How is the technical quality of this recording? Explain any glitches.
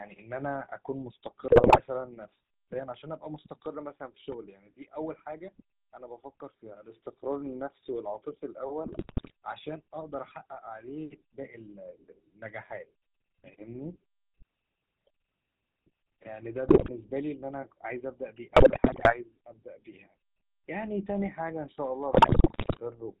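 The quality is poor: plainly audible narrowband codec damage throughout, plus repeated decoding bursts and one pop.

GSM full-rate codec, throughout: pulse-driven vocal-tract modelling at what sounds like 13 kbit/s strips everything above 4 kHz, leaving a buzzy, gravelly roughness rather than the smearing of modern codecs.

GSM bit errors, at 1.48–1.81 s, 8.86–9.32 s, 16.68–16.90 s, 18.56–19.30 s and 22.12–22.81 s: corrupted filter, pitch and gain values cause squawks, gargling and level bursts, unlike clean dropouts.

Loud pop, at 4.32–4.34 s: a single sharp pop well above the speech, which continues underneath. It is most likely a voltage step from a plug, switch or static, not codec corruption.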